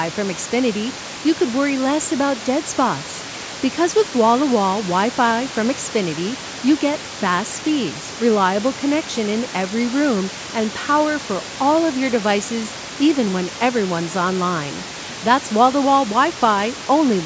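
No faults can be heard in the speech, which shows only the normal band limit of call microphone processing, with nothing above 8 kHz, and room noise about 16 dB below the voice.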